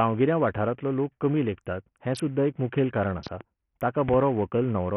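Throughout the speech the treble comes and goes and a gritty, grainy noise clings to every syllable, likely from heavy Bluetooth SBC compression at a starved bit pool, which fits a rate near 48 kbps. On a spectrogram the upper sub-bands show patchy, blocky gaps and flickering energy.

Just after "सुद्दां एक मुखेल कारण", from 3.27 to 3.43 s, a loud pop arrives as a double crack about 10 dB above the speech. At 4.09 to 4.16 s another double pop peaks about 15 dB above it. Both are probably voltage glitches. The waveform shows tall paired spikes, and the spectrogram shows thin full-height vertical lines.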